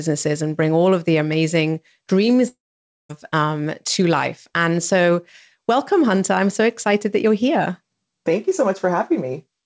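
A long network dropout runs from 2.48 to 3.11 s, just after "of the amazing dreams". A brief fading buzz stretches the last sound, then 0.53 s of silence follows before audio returns at "um to life", with 0.62 s lost, likely from packets that never arrived.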